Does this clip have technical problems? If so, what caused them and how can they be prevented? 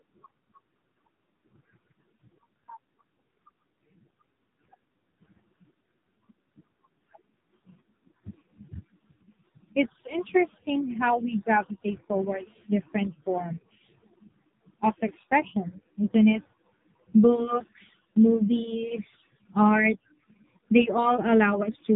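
Yes. Throughout the speech, the AMR narrowband mobile codec is audible: nothing above 3.8 kHz survives, and the voice sounds heavily buzzy and synthetic. This fits a low AMR-NB mode near 5.9 kbps, where a vocal-tract model driven by sparse pulses replaces the real waveform. To prevent it, capture or transfer the audio over a wideband path at a higher bitrate instead of a narrowband mobile call.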